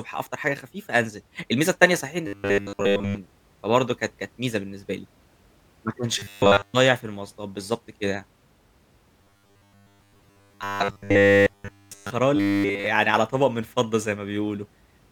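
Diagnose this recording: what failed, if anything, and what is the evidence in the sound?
The speech turns into a flat, metallic 100 Hz buzz at 2.27–3.18 s, 6.19–6.74 s, 9.21–12.10 s and 12.36–12.86 s. That's robotic sound from repeated short buffers, most likely a starved driver or playback buffer. When fresh audio doesn't arrive in time, the last slice gets looped while the real audio is dropped. The 100 Hz buzz fits a 10 ms buffer. The short bursts are almost entirely repeats, and the long stretch at 9.21 s is mostly repeats.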